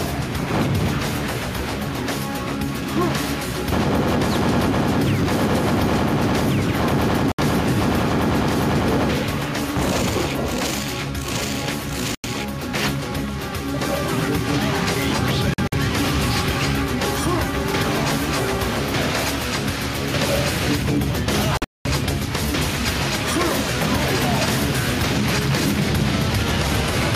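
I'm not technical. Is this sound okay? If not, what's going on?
No. Two problems stand out.

Throughout, there's gain pumping. Loud and soft parts are squashed closer together in level. The likely cause is the recording level set far too high, with automatic level control pulling it down on every loud moment.

There are also Bluetooth dropouts. The sound cuts out briefly at 7.32 to 7.40 seconds and 12.15 to 12.26 seconds. From 15.54 to 15.74 seconds it stutters through tiny gaps. At 21.57 to 21.87 seconds it mostly vanishes for about a fifth of a second. Each time it picks up further along, skipping what was lost. This likely comes from the wireless link to the headphones failing to deliver audio in time.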